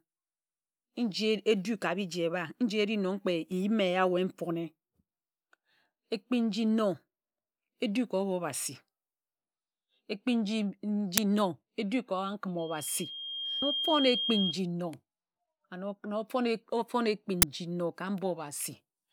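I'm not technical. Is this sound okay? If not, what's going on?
No. At 11.18 and 17.42 seconds there are tiny loud cracks, an uninitialised buffer, where leftover memory played as sound. From 12.59 to 14.56 seconds, a loudspeaker feedback squeal: one steady 3.2 kHz whistle swelling over about a second, unlike a brief burst.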